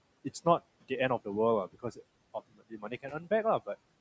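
From 1.73 to 1.99 s and 2.34 to 3.28 s, speech is cut by the noise suppressor, dipping about 14 and 19 dB; the speech fades rather than dropping to silence, unlike packet loss.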